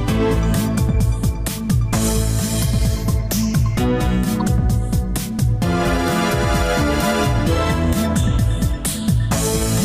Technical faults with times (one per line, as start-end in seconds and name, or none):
4.40 corrupt frame decoded